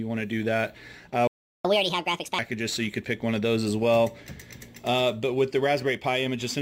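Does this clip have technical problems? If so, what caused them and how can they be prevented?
Yes. A playback stall cuts the sound off at 1.27 s, leaving silence until 1.65 s, about 0.37 s. It was likely caused by the player's buffer running dry or its audio thread being blocked. Unlike a dropout in the recording itself, the sound resumes from the point where it stopped rather than skipping ahead. A larger playback buffer and a higher-priority audio thread would prevent it.

Catch-up at higher speed follows from 1.65 to 2.39 s. The player resamples its backlog at 1.5 times normal speed, so both tempo and pitch rise by roughly seven semitones, then snap back to normal. Unlike gradual speed wobble, the shift is steady and starts exactly where the stall ends. A pitch-preserving time-stretch, or a gentler catch-up rate, would avoid the audible pitch jump.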